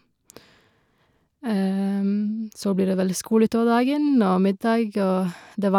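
No technical faults can be heard anywhere in the speech recording; the signal stays continuous and intact throughout.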